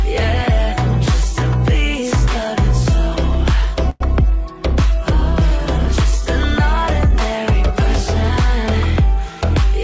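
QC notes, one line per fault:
3.90–4.02 s, call audio freeze: The sound stops moving forward for about a tenth of a second. In its place a short continuation of the last sound fills the gap and fades without reaching silence. Then the audio resumes exactly where it left off, so nothing is lost, but everything after runs about 104 ms later. This is likely packets stalling in transit and the jitter buffer running dry, heard through a call codec band-limited to 8 kHz.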